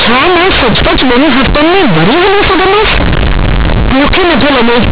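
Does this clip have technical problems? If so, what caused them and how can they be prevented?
Yes. Throughout the speech the A-law bytes were played as plain linear 8-bit samples without expansion, so companded audio read as linear causes every sign change to swing across about half the range, giving loud, buzzy distortion and heavy noise in pauses. Prevent it by decoding A-law to linear PCM before playback.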